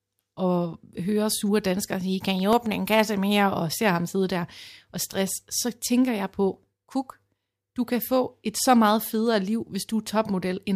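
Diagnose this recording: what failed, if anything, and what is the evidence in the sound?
The fault lies in the playback stage, in the form of CD scratch ticks. Between 2.26 and 2.66 s, just after "hører sure danskere sige" and before "en kasse mere og", four evenly spaced ticks occur, each no longer than a couple of milliseconds, at roughly seven or eight per second. A blemish on the disc defeats the error correction once per revolution, and the player conceals the damaged samples. Unlike buffer-underrun clicks, these ticks follow the disc's rotation, keeping a steady spacing.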